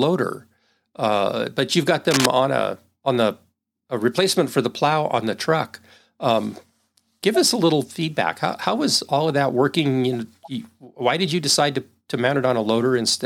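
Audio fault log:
2.11–2.26 s, cable scratch noise: just after "uh but you've got" and ending before "on a on the", a dense, ragged burst of scratching and rustling sits over the speech for about 0.15 s, roughly as loud as the speech itself. The likely cause is a worn cable or connector being moved, so its contact resistance fluctuates rapidly and injects irregular noise bursts into the signal path, heard as a brief crackling scrape.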